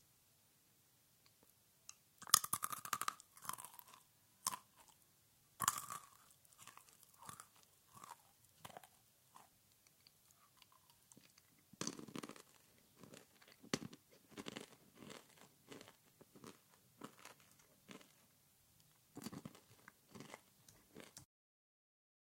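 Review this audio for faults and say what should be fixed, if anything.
No faults; nothing to fix.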